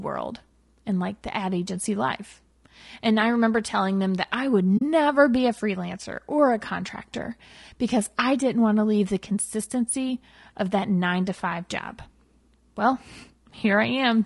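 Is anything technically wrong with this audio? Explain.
Yes. Throughout the clip the speech is plainly marked by compression damage. The sound is rough and grainy, with a hiss-like fill between the voice's harmonics and a top band that sounds thin and synthetic. This is most likely low-delay AAC compression (AAC-ELD) at a low bitrate, around 32 kbps. Its very short frames cannot separate closely spaced pitch harmonics well, and at this bitrate bits run short. On a spectrogram the harmonic stripes look smeared, with noise between them, and the high band looks patchy.

From 4.77 to 4.82 s there is a brief hole, about 40 ms long, which fits roughly two lost frames. This is AAC frame loss with muting: the decoder replaced the missing frames' spectrum with silence, and the overlapping windows fade the sound down and back up rather than cutting it hard. It sounds like a soft dropout. On a waveform it is a short tapered dip to near zero, and on a spectrogram it is a narrow blank vertical band across all frequencies.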